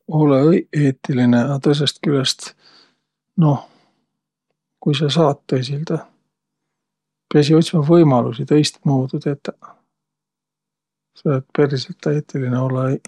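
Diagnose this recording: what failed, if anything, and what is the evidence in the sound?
Nothing in this speech recording points to a failure at any stage of the chain. The speech carries on without any audible event that would mark a breakdown in capture, processing or delivery.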